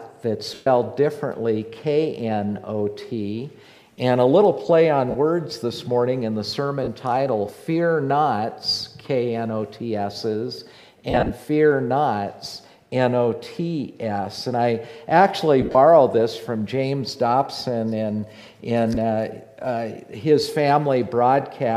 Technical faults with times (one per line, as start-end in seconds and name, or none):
0.54-0.67 lost LE Audio frames
5.10-5.15 lost LE Audio frames
6.84-6.88 lost LE Audio frames
11.10-11.30 lost LE Audio frames
15.61-15.75 lost LE Audio frames
18.94-18.97 lost LE Audio frames